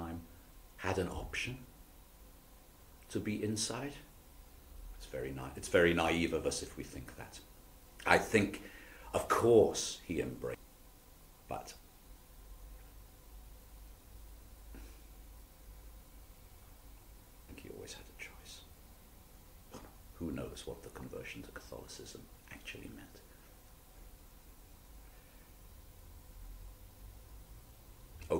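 Damaged data in the compressed stream causes three brief blips at 0.50, 10.54 and 23.95 s, where the decoder misreads corrupted frames and briefly loses sync.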